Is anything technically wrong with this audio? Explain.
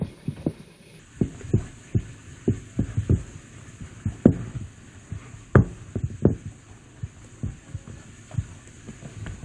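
Yes. Wrong sample rate from 0.99 s to the end: the samples are read out slower than they were captured, with no conversion, which fits 32 kHz material played at 22 kHz. Everything runs at 0.689 speed and drops 6.45 semitones, sounding low, slowed and dragged.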